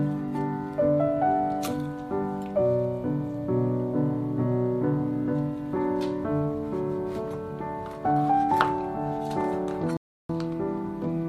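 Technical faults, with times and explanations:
9.97 to 10.30 s, Bluetooth stall: the sound drops to silence for about 0.33 s, then resumes, likely because delayed packets left the headphone buffer empty.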